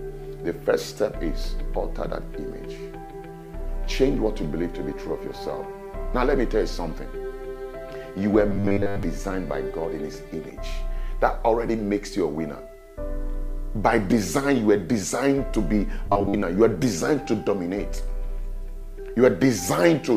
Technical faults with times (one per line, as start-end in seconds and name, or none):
8.49-9.03 robotic sound from repeated short buffers
16.06-16.42 robotic sound from repeated short buffers